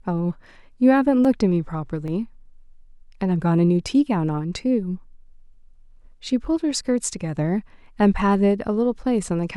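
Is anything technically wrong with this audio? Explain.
Yes, the speech has three single sharp clicks, at 0.44, 1.25 and 2.08 s, each a thin vertical line across the spectrum. These are likely dropped samples: under a millisecond of signal vanishes, so the waveform jumps abruptly. Unlike a dropout, no audible gap or silence follows.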